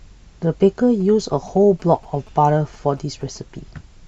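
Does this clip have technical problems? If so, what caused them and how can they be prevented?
Yes, there are GSM signalling bursts from about 1.00 to 3.38 s: a galloping dit-dit pattern of short 217 Hz buzzes, fairly quiet under the speech. A nearby 2G phone was signalling, and the audio circuit rectified its radio bursts. Keeping phones away from the mic and cabling prevents it.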